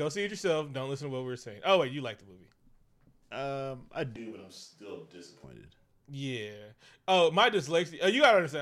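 A switch to a distant microphone occurs from 4.16 s to 5.44 s, right after "um i". The speech abruptly turns roomy and hollow, loses its low end and falls by roughly 5 dB, while background noise comes up to sit only about 25 dB below the speech. The likely cause is that the close microphone's feed dropped out and a farther pickup took over, catching more room reflection. At 5.44 s the close sound returns just as suddenly.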